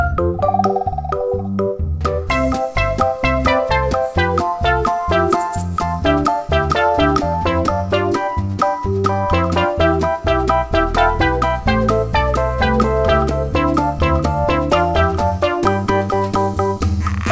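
No technical faults occur in this audio; it has passed through a wideband call path, with nothing above 8 kHz, which fits a G.722 codec.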